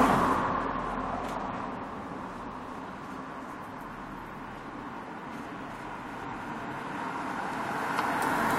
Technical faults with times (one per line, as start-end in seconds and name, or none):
none